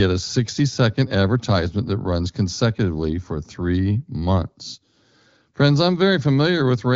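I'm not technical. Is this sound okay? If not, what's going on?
Yes, this sound is okay, with nothing wrong going on in it.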